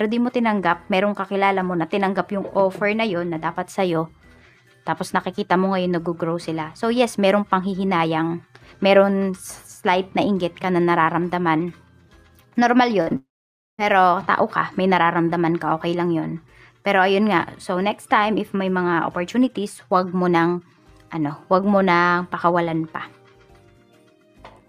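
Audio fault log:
13.01–13.09 s, burst of packet loss: About 60 ms of audio is missing. The receiver stretches the last sound for roughly 53 ms and turns it down, so a held buzz or fading hiss replaces what should be there, and the sound then resumes further along. On a spectrogram the harmonics or noise band freeze into flat horizontal streaks that dim toward the right. The waveform shows a repeating, shrinking pattern before normal detail returns.
13.09–13.12 s, short concealed packet loss: Directly after the burst, another 20 ms fails to arrive in time. The receiver fills about 18 ms by extending the preceding sound and blending back into the real audio, which sounds like a brief smear or wobble and can swallow a short consonant. On a spectrogram it is a narrow vertical band where fine detail softens and transients vanish. The waveform shows a slightly smoothed patch with a soft join at each edge.
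13.16–13.80 s, long network dropout: Roughly 620 ms of audio never plays. For the first instant the last sound carries on as a fading buzz or hiss, then it falls away into about 530 ms of silence before the audio comes back further along, with the stretch in between lost. The likely cause is a network interruption. On a spectrogram this is a wide blank column after a brief dimming smear, and the waveform shows a near-flat line.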